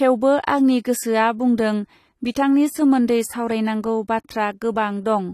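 AAC compression runs throughout: nothing is heard above 14 kHz, and the speech has a dull, smeared quality with a warbling, fizzy edge on sibilants. This is likely a low-bitrate AAC-LC encode, consistent with about 32 kbps.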